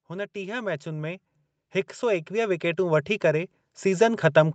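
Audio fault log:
0.05 to 1.29 s and 1.99 s to the end, automatic gain rising: the gain control judged the speech input too quiet and turned itself up gradually, by about 6 dB over the first stretch. Speech and background noise swell together. On the waveform, the envelope widens steadily across each span, noise floor included. On the spectrogram, every band brightens together under a content spectrum capped near 8 kHz, consistent with the call's Opus wideband path.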